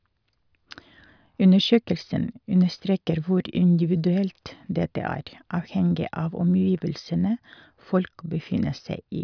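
No technical faults can be heard anywhere in this speech recording. The sound stays continuous and consistent throughout, with no event that needs a time marked.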